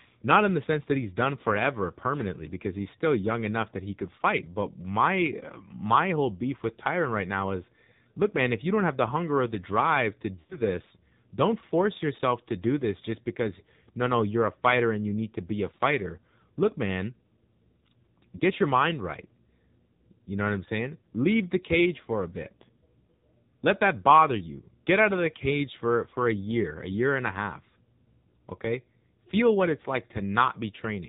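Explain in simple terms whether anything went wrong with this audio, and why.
Two things went wrong. The whole recording went through the AMR narrowband mobile codec, the old phone-network speech coder. It drops everything above 4 kHz, so the speech sounds muffled and boxy. It also rebuilds the voice from a simple model, which leaves it noticeably buzzy and synthetic throughout.

There are also lost AMR speech frames, where chunks of data were garbled by radio errors and had to be thrown away. From 10.40 to 10.60 s, just after "or the drive to", about 120 ms went missing in scattered bits. The decoder stretched out the last sound and let it fade, so the speech goes smeared and fades toward silence. There's a shorter 20 ms dropout at 18.38 to 18.42 s, right before "your mind right", heard as a quick dip.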